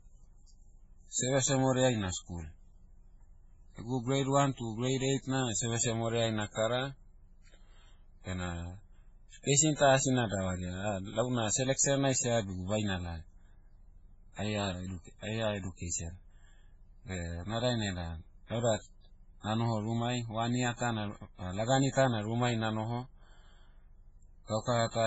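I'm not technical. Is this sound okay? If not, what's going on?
No, not quite. The speech sounds dull and smeary from start to finish, with nothing above 7.7 kHz. That's likely transcoding between lossy codecs: squeezed as a low-quality MP3, then squeezed again as WMA, so both sets of blemishes pile up.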